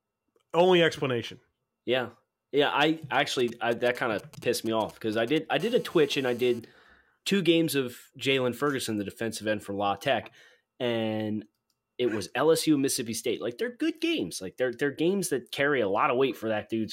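From 3.39 to 5.61 s, GSM signalling bursts break in. A nearby 2G phone sends short radio bursts, rectified as galloping ticks and brief 217 Hz buzzes, roughly 20 dB under the speech.

From 5.61 to 6.59 s, a steady GSM phone buzz follows. Continuous 217 Hz transmission bursts give a hard, raspy, harmonic-rich tone about 26 dB below the speech.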